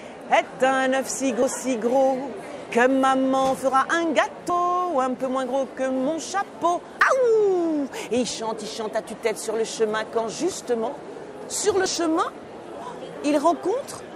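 Whole compressed frames were dropped from the stream, either missing or rejected by the decoder as damaged, so playback jumps forward. At 1.42, 4.50 and 6.99 s the gap is about a tenth of a second, consistent with three 32 ms frames. At 11.86 s it is a single frame, around 30 ms. Each jump leaves a little audio missing.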